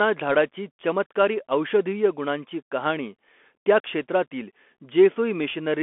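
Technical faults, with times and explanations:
Throughout, Bluetooth CVSD headset codec: the link codes the speech one bit per sample with an adaptive step, which fits a 64 kbps CVSD stream, and passes only about 250 Hz to 3.4 kHz, nothing above 3.8 kHz. Loud highs outrun the step and distort, s sounds turn scratchy, and granular hiss sits underneath.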